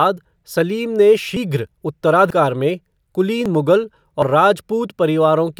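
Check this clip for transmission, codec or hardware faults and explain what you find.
Four skips in the speech, likely dropped buffers (overruns), at 1.37 s (just after "सलीम ने"), 2.30 s, 3.46 s and 4.22 s. Samples were overwritten before being read, so roughly 40 ms to a tenth of a second vanishes each time. The speech jumps ahead with no gap.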